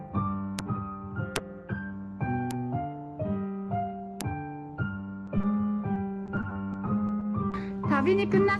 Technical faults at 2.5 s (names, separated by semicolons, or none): bit error spike